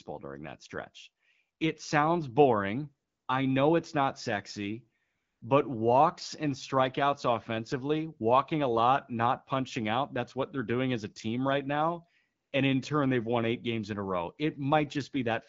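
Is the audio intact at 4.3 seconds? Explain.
Yes, at 4.3 seconds the audio is intact, with the speech carried through the AMR wideband (HD Voice) codec at 12.65 kbit/s and no fault at that moment.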